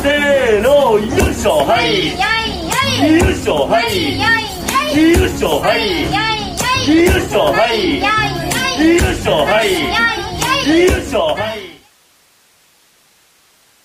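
Nothing is technically wrong with the clip; the audio simply eases out in a smooth fade from around 11 s to 11.95 s.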